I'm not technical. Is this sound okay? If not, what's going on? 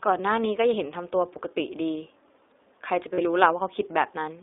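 No. The speech has passed through the iLBC codec, a low-bandwidth internet-phone format. It keeps only roughly 300 Hz to 3.7 kHz, so the voice sounds thin and boxed-in, with a noticeably rough, slightly synthetic edge throughout.

There are also lost iLBC frames from 3.14 to 3.20 s. About 40 ms of audio went missing, which fits two dropped packets. The decoder filled the hole by repeating the last bit of voice, heard as a brief buzzy hold before normal speech returns.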